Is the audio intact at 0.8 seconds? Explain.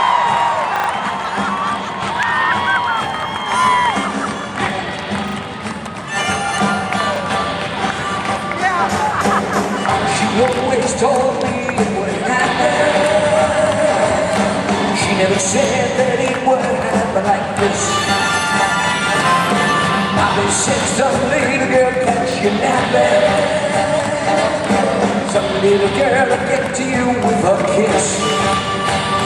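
No. A repeated buffer at 0.76 to 0.88 s: new audio arrived late, so the last block replayed, a stutter of four hard-joined copies fitting a 40 ms buffer.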